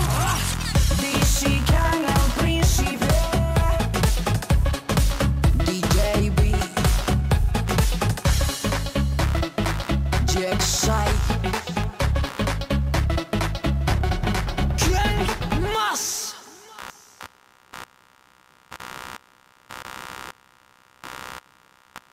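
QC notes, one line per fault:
throughout computer activity noise: buzzing pulses near 70 Hz, about 20 dB below the sound, from computer load shifting the shared ground; spectrogram shows regular vertical streaks.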